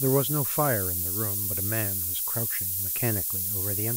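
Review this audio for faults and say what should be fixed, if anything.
The whole clip has a low bit depth with noise shaping fault. A steady, thin hiss sits under the speech from start to finish and climbs sharply toward the top of the band. The hiss is loud, about 5 dB above the speech, which fits requantisation to around 3 bits. The rounding error from those few coarse steps is fed back and pushed upward in frequency, so you hear a bright wash riding over the speech. To prevent it, keep the export at 16 bits or more and only apply dither or noise shaping at the final stage.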